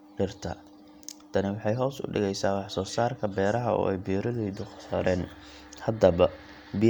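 Nothing in the speech stood out as a technical fault on listening.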